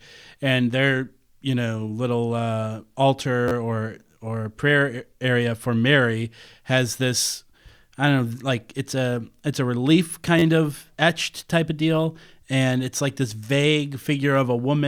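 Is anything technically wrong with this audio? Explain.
Yes. There are two repeated buffers, at 3.48 to 3.52 s and 10.39 to 10.43 s in the speech. New audio arrived late, so playback replayed an 11.6 ms piece, which fits a 512-sample buffer, three extra times. Each event is a brief buzzy stutter with hard joins, and no speech appears to be lost.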